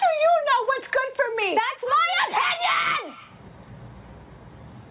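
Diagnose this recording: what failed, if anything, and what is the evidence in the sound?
Gain pumping runs through the whole recording, with the gain swinging by around 20 dB. Loud and quiet passages sit close together in level, and the sound is squashed flat. The likely cause is input gain set far too high at the microphone stage, with a fast limiter or compressor in call processing clamping down on every peak and releasing in the pauses. The narrowband call path cuts everything above 4 kHz.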